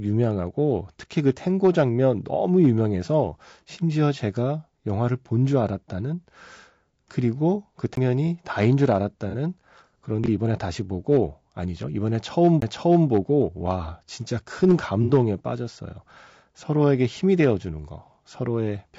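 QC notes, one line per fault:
throughout: low-delay AAC compression. The speech has a rough, grainy texture, with noise filling the gaps between harmonics and a thin, synthetic top band, likely from AAC-ELD coding at 32 kbps. On a spectrogram the harmonic lines look smeared and speckled, with blocky, patchy energy above a few kHz.
7.95 s and 12.60 s: CD skip. At each point there is a mute of roughly 15 ms, after which the sound carries on from a different place, as though the pickup had jumped a turn along the spiral. A waveform shows a brief near-flat gap bounded by discontinuities, and the material on either side doesn't line up.
9.30–9.35 s and 15.03–15.11 s: AAC frame loss with concealment. One frame (30 ms) is lost at the first point and two frames (60 ms) at the second. The decoder fills in from the last good spectrum, which leaves a smeared, noisy patch. A spectrogram shows blurred, noise-like energy in place of clear harmonics, and the longer patch is wider.
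10.24–10.28 s: chunks out of order. A 20 ms chunk plays one chunk late, after the one meant to follow it, so there is a brief jumbled moment with nothing missing. On the waveform, three hard joins appear close together where the segments meet with mismatched amplitude.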